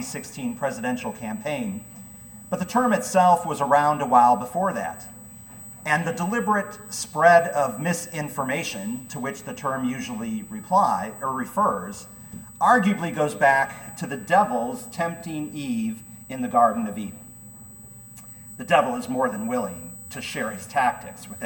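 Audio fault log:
Throughout: USB whine, current drawn in 125-microsecond microframes leaks through power or ground, leaving a steady 8 kHz tone roughly 20 dB below the sound.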